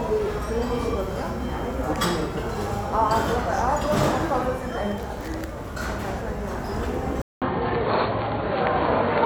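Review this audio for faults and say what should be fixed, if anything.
At 7.22 s the sound cuts out for about 200 ms, then returns duller and boxier until the end of the clip, with nothing above 4.4 kHz, a level shift of roughly 5 dB, and a new background noise sitting roughly 40 dB below the signal. This is likely an input switched to a poorer device. A codec's bandwidth drop would narrow the band without the gap, the new noise floor or the level jump. To prevent it, lock the recording input so the system cannot change devices mid-capture.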